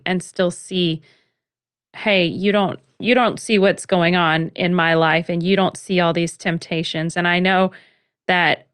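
No technical faults occur at any point in this speech, which comes through an ordinary call path with the usual character of its codec.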